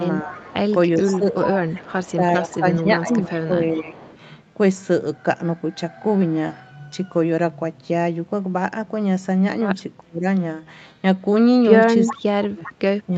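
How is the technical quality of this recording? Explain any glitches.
The recording has two recurring call faults: the speech is repeatedly pushed down during double talk, and a delayed echo leaks back. The whole clip is limited to 8 kHz, which fits an Opus call path.

Speech suppressed in double talk occurs at 0.23–0.44 s, 1.02–1.56 s, 2.15–4.01 s, 10.02–10.25 s and from 12.13 s to the end. With both sides active, the echo canceller likely could not separate them and ducked both. The level dips by about 5 dB at first, then about 10 dB, 15 dB, 30 dB and finally 35 dB, so the speech is audibly turned down.

Echo leak appears at 0.26–3.41 s, 3.98–4.18 s and 12.06–12.73 s. One side's echo cancellation likely left some loudspeaker pickup unremoved, and it returned as a copy of the speech 400 ms late. It sits about 15 dB, 25 dB and 10 dB below the speech, heard as a trailing double.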